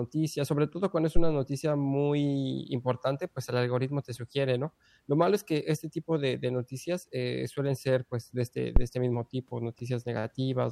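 At 8.76 to 8.85 s, between "ser pues de este" and "este mismo tipo", there's a phantom power thump: supply switching on a live input pushed a step through the coupling caps, giving a low thud peaking around -8 dBFS and dying away within about 19 ms.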